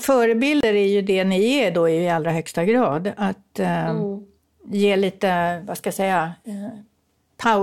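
At 0.61 s the speech drops to silence for about 27 ms and then resumes, a Bluetooth stall, likely from delayed packets leaving the receiver's buffer empty.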